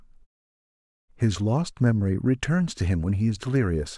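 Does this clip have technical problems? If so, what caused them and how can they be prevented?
No, there's nothing technically wrong with this speech clip, and the quiet stretches between phrases dropping to silence is just the normal muting of pauses at work, with only very quiet sound lost around them.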